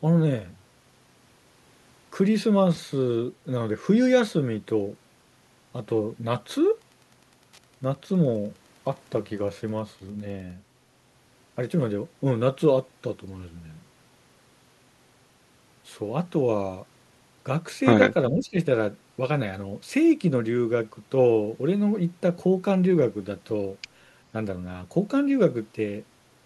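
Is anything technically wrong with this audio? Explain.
Yes, there are two faults.

From 6.72 to 10.56 s, Wi-Fi interference: the audio circuit rectifies a nearby radio's beacons every 102.4 ms, adding faint ticking about ten times a second, around 40 dB below the speech.

From 18.30 to 18.57 s, speech suppressed in double talk: the echo canceller likely mistook simultaneous talk for echo and turned it down, so the speech dips by about 10 dB.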